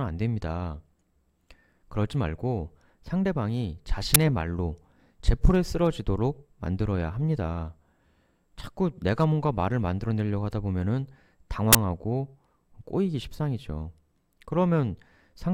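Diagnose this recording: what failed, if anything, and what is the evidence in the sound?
The failure is at the driver or buffer stage: an uninitialised buffer, heard twice in this speech. A loud crack cuts in at 4.15 s, lasting about 12 ms, and a burst runs from 11.73 to 11.75 s, about 23 ms. Those lengths fit a 512-sample buffer and then a 1024-sample one. Each block reached the output before audio was written into it, so leftover memory played as samples.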